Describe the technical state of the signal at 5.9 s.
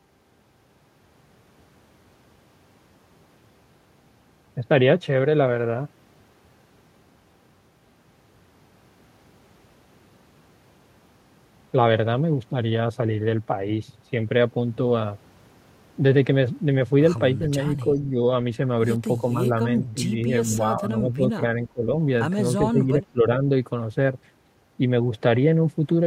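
At 5.9 s the speech signal is intact, with no dropout, distortion, glitch or other fault audible at that moment.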